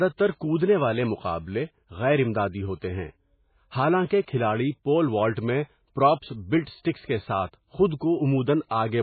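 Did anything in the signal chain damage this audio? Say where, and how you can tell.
Yes, the damage happens at the codec stage, for the whole length of the speech. Nothing comes through above 4.5 kHz, and the sound is watery and swirly because weak frequency lines keep flickering in and out. That points to heavy MP3 compression, likely starved at something like 16 kbps.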